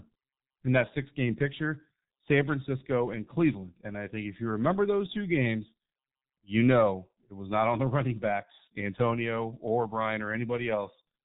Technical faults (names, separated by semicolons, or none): G.723.1 codec